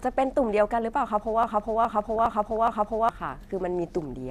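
At 1.43 s the speech gets stuck in a broken-record loop: a chunk of about 0.41 s plays four times back to back, running until 3.09 s. Each pass is identical, so it's not an echo. It's the same fragment stuck on repeat, and whatever should have been said in that stretch is simply gone. The likely culprit is a stall somewhere in the player, encoder or stream, with the last buffered piece replayed until things caught up.

Right in the middle of that loop, from 1.96 to 2.57 s, DAB burbling joins in over the repeated speech. It's typical of weak reception, where bit errors, at a rate well under one percent here, slip past the error correction into the MP2 audio. Corrupted samples put short blips of noise in single sub-bands, and corrupted scale factors make sub-bands jump in level for up to a frame, with 26 frames hit across the stretch. A second, shorter burst hits at 3.97 to 4.07 s. It's only a tenth of a second, but the errors are somewhat denser, so it comes through as a quick burst of the same corruption.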